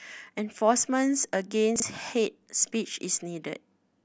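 A speech recording with chunks out of order around 1.76 to 1.82 s. One 20 ms chunk plays two chunks late, scrambling that moment with three hard joins.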